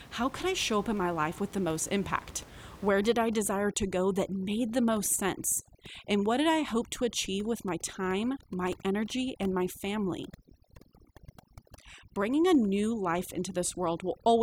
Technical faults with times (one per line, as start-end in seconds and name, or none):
2.89-14.42 overdone noise removal